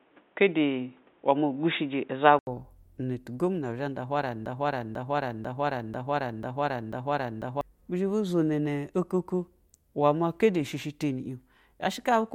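From the start to 2.47 s, the input was most likely on a poorer device, such as a headset in its call profile, before switching back to the main microphone. On that device the speech is band-limited, with nothing above 3.8 kHz, so it sounds dull and boxy, carries its own faint noise roughly 40 dB below the speech, and sits around 5 dB off in level. At 2.47 s an 80 ms silence marks the switch, and the full-band sound returns.

From 4.46 s to 7.61 s, just after "nda uhwa ra nɛ", the stream likely stalled, and the player kept re-sending the last fragment it held. This broken-record loop repeats a 0.49 s piece exactly, back to back, six times, producing a rigid stutter. The speech that should have filled those three seconds is gone, and normal playback resumes at "ba zhabu zono ne".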